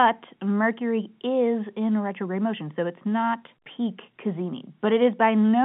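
No faults to report: the speech sits within an ordinary G.711 telephone coding path, band-limited to 150 Hz through 3.5 kHz, and nothing beyond that line character calls for comment.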